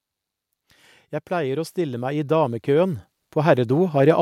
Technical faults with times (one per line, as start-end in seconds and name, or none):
1.28-4.17 automatic gain rising